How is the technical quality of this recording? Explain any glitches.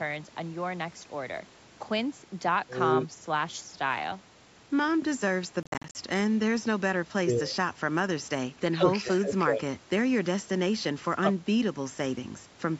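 There's one real glitch, a short stretch where the speech breaks up, heard over call-style audio that tops out around 8 kHz.

From 5.63 to 5.95 s you get a likely Bluetooth dropout: packets missed their slot, so playback went silent in choppy bursts totalling about 200 ms, the longest gap near 53 ms, and the speech picks up further along, as if it had kept playing.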